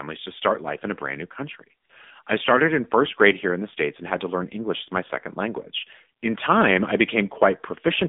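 Throughout the recording, the speech has passed through the AMR narrowband mobile codec. The signal was reduced to telephone bandwidth, roughly 200 Hz to 3.6 kHz, and then rebuilt from a compact vocal-tract model driven by sparse pulses. The thin, buzzy and plainly synthetic quality points to one of the lower AMR-NB modes, consistent with about 7.4 kbps. Everything above 3.6 kHz is gone, so sibilants lose their edge and the voice sounds boxed-in and robotic.

Between "a brand new country" and "I started in first", AMR comfort noise appears twice. At 1.86 to 1.90 s and again at 2.24 to 2.26 s, the encoder judged the signal to be silence and stopped sending speech frames, for 40 ms and 20 ms respectively. The decoder filled each gap with generated noise shaped from a coarse level and spectrum estimate. The real background briefly gives way to a smooth, even hiss that switches in and out abruptly.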